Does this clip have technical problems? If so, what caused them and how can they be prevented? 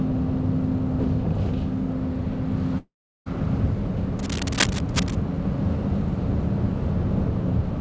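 Yes, there are two faults.

From 2.78 to 3.28 s there is a long network dropout. About 0.48 s of audio likely never reached the receiver. The receiver stretched the last sound into a short fading buzz, then left about 0.37 s of near silence, and the sounds resume with that stretch missing. A steadier network link, a deeper jitter buffer and redundancy such as forward error correction would prevent it.

From 4.19 to 5.15 s there is cable scratch noise. A worn cable, connector or control was likely moved, so its contact resistance changed rapidly. This lays dense, uneven bursts of scratching and rustling over the sound, only slightly quieter than the sound itself. Cleaning or replacing worn connectors and securing cables so they don't move during recording would prevent it.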